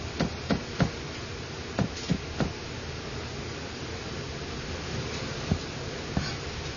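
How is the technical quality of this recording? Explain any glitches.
The technical quality is poor: throughout the recording the sound is dull and smeared, with nothing above about 6.9 kHz and a warbling, fizzy texture on sustained sounds. This is likely AAC compression, AAC-LC at a low bitrate that fits about 24 kbps. At that rate the encoder cannot afford the upper spectrum, so it cuts it off and quantises what remains coarsely, leaving the plainly audible smearing and swirling artefacts.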